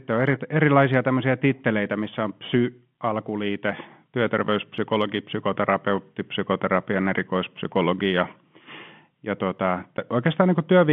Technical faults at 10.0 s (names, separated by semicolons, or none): packet loss filled with silence